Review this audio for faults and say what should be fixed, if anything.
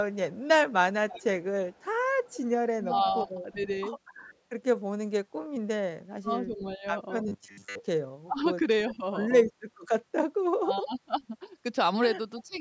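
Echo leak, 0.13 to 4.36 s and 12.41 to 12.58 s: a faint copy of the speech trails it by 335 ms, likely because the far end's echo canceller lets loudspeaker pickup through. The fixed delay distinguishes it from room reverberation. Better echo cancellation or using a headset at the far end would prevent it.

Speech suppressed in double talk, 2.88 to 3.61 s, 6.2 to 6.85 s, 8.26 to 9.03 s, 10.5 to 11.35 s and 12.39 to 12.61 s: the speech dips by roughly 10 to 30 dB in pieces. This is likely the echo canceller attenuating both talkers at once. Unlike packet loss, the speech is turned down rather than cut off abruptly. Tuning the canceller to preserve near-end speech during overlap would prevent it.

Robotic sound from repeated short buffers, 7.28 to 7.80 s: the speech becomes a rigid metallic buzz at 100 Hz, which fits a repeated 10 ms buffer likely filling most of that stretch while late audio was skipped. 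The fixed buzz pitch distinguishes it from codec warble. A larger or adaptive jitter buffer would prevent it.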